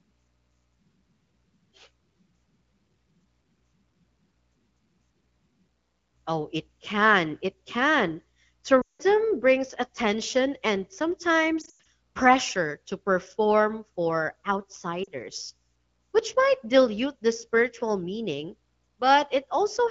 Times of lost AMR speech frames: 8.81-9.02, 11.61-11.75, 15.03-15.09

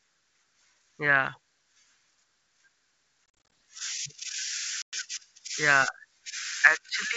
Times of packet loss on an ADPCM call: 3.26-3.52, 4.82-4.94

